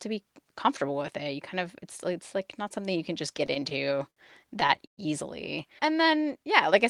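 The speech drags and stutters twice. From 3.37 to 4.18 s, just after "something you can just", it catches about eight times in short holds, the longest near 61 ms. From 4.60 to 4.99 s four longer holds fill more than a third of the span, one stretching to 118 ms. These are repeated stalls (stutter): packets arrived late, the jitter buffer kept running dry, and the receiver extended the last sound until more arrived, so nothing is lost but timing suffers.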